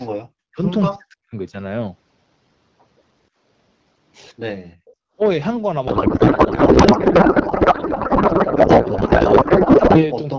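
From 0.31 to 0.62 s and again from 0.89 to 1.36 s, the speech drops by roughly 40 dB, thinning and breaking into pieces. This is likely speech suppressed in double talk: with both ends active, the echo canceller attenuated the near-end talker along with the echo. A shorter dip of about 30 dB at 10.35 to 10.39 s looks like the same fault.

Between 4.75 and 5.16 s the room background falls away by about 40 dB for roughly 0.4 s and then returns. This is background gated by the echo canceller, which clamped the microphone path hard while the loudspeaker was playing and released it afterwards.

Inside that gated stretch, from 4.86 to 4.91 s, a brief, very faint scrap of delayed voice comes through, around 30 dB below the speech and trailing by about 309 ms. This is likely an echo leak, where loudspeaker sound picked up by the microphone was not fully cancelled and was sent back.

From 5.87 s to 10.04 s the speech turns into garbled noise and warble that barely tracks the talker. 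This is a codec payload misread. Although the AMR wideband codec itself runs cleanly at 12.65 kbit/s, the sound points to octet-aligned AMR frames being unpacked as bandwidth-efficient ones, so the decoder read every field in the wrong position.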